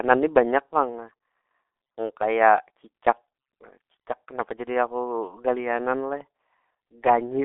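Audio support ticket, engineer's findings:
G.723.1 codec, throughout speech. Muffled, hoarse, consonants smeared; band 250 Hz to 3.6 kHz, nothing above 3.8 kHz. Sound fits a 6.3 kbit/s low-rate vocoder with 30 ms frames and a slow voice-model update. Unlike a plain narrowband phone line, heavy coding damage adds roughness and blurred onsets, not just lost top end.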